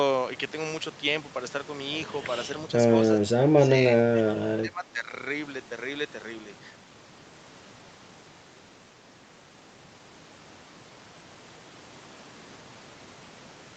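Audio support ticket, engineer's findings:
Speech suppressed in double talk, 3.2–3.7 s and 4.35–5.12 s. Talker level drops by about 20 dB in the first window and about 15 dB in the second, with roughly 0.4 s and 0.5 s of audio pulled down respectively. Likely cause: echo canceller unable to separate near-end speech from loudspeaker echo during overlap, attenuating both. Band ends near 8 kHz throughout, consistent with a wideband Opus call path.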